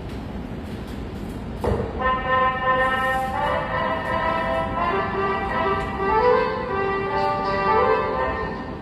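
From start to finish the treble has a bright but synthetic sheen, with nothing above about 14.9 kHz and plainly audible damage. This is likely HE-AAC compression at a low rate, around 24 kbps. The upper band is rebuilt from copied lower bands rather than coded, so its harmonics don't line up with those below the crossover, and the highs sound gritty and metallic. A simple low-pass filter would sound dull instead, with no false brightness.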